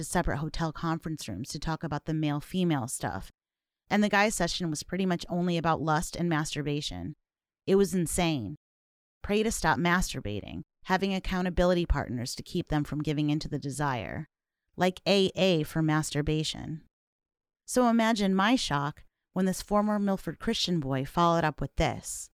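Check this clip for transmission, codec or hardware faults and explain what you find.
No faults can be heard anywhere in this speech clip.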